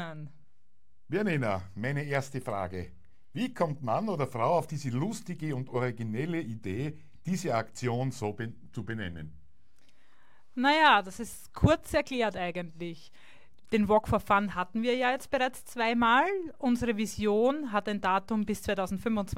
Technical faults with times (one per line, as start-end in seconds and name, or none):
none